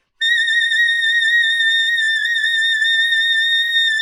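Sounds here, and from about 0.80 s right through to the end there's a time-stretched section: the pace suddenly drops to roughly 0.61 times normal speed while the pitch stays put. That slowed stretch drags, because short slices are being repeated to pad out the length. The likely cause is software stretching that part to fit a longer slot while preserving pitch.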